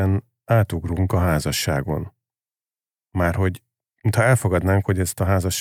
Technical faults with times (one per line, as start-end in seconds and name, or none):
none